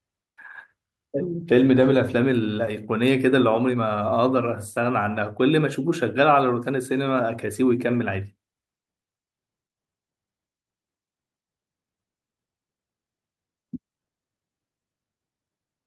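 No technical faults occur at any point in this speech recording, so there is nothing to describe in time order.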